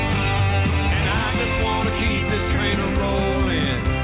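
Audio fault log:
Nothing to log here: the audio came through a call path, and the top end stops at 4 kHz, which fits a G.711 mu-law codec at 64 kbps and is simply how that path sounds.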